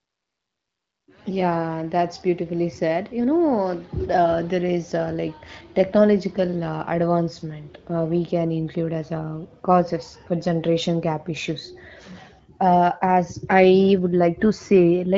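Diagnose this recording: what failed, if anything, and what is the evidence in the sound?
Nothing failed: the speech shows only the light, band-limited character of the AMR wideband (HD Voice) codec, consistent with one of its upper modes around 15.85 kbit/s, and no stage in the chain leaves a defect.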